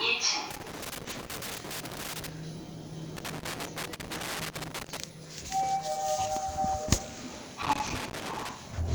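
Irregular bursts of crackle and scratching break up the sound from 0.51 to 2.29 s, 3.17 to 4.97 s and 7.63 to 8.51 s. This is loose connector crackle: a worn or dirty contact rapidly making and breaking, chopping the signal into jagged fragments.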